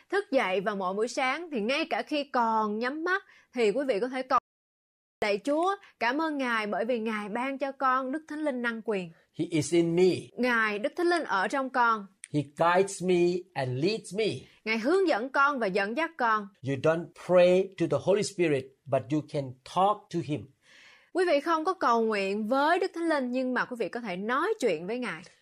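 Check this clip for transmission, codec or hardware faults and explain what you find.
One fault is present. From 4.38 s to 5.22 s, just after "quý vị có thể", there is an audio dropout to silence: the speech cuts off mid-flow into about 0.84 s of silence with no room tone, likely from a lost input feed while recording continued.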